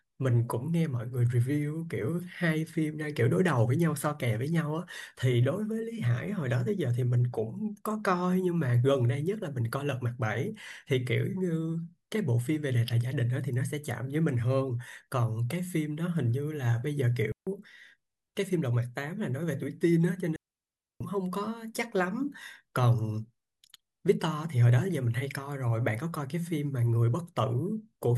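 At 17.32 s the speech drops into a clean hole of near silence lasting about 148 ms, and at 20.36 s a longer one of about 650 ms runs to 21.01 s. Both are digital wireless dropouts: the radio link lost too much data, so the receiver muted with a very brief fade rather than passing damaged audio. No noise burst precedes or follows either gap. A waveform shows flat, near-zero stretches with steep edges, and a spectrogram shows blank vertical bands across all frequencies.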